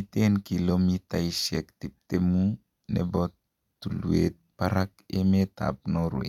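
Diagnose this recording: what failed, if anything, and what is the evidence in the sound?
Nothing failed: the speech carries no audible defect attributable to any stage of the chain, from capture to playback.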